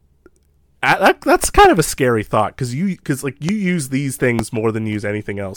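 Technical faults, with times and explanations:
1.44–1.67 s (two pops), 3.49–3.51 s and 4.39–4.42 s: loud pops, about 15 dB above the speech, which continues underneath. Likely electrical spikes from switching or static.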